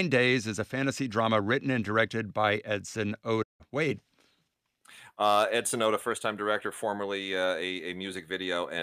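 Speech here, and there's one clear digital broadcast dropout around 3.42 to 3.62 s. The audio fades out over roughly 20 ms, then sits in silence for about 160 ms before coming back further along in the programme, so that stretch of speech is simply gone rather than garbled. That's the receiver muting when it lost the signal or got frames failing their checksum; the gap fits something like five lost frames.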